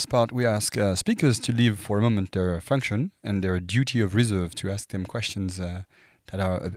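Nothing in this bit of speech catches the ear as a technical fault; the recording simply runs along without any glitches or interruptions worth pointing out.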